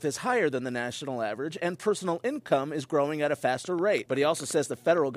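From 3.57 s to 5.16 s a train of clicks, about fifteen, ticks over the sound at roughly 10 per second with uneven spacing, likely from interference or a faulty connection. Each pulse peaks a little above the signal, showing as thin vertical lines spanning the spectrogram.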